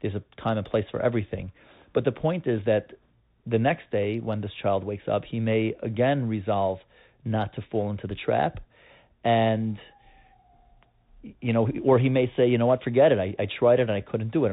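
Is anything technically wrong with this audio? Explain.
Yes. The speech carries the Bluetooth CVSD headset codec throughout the clip, and the damage is plainly audible. CVSD encodes one bit per sample, only whether the waveform should step up or down, and adapts its step size as it goes. The bandwidth stops at 4 kHz, leaving the speech narrow and boxy. Loud high-frequency content outruns the step size and distorts, s sounds come out scratchy, and a granular hiss runs under the speech, which fits a 64 kbps CVSD link.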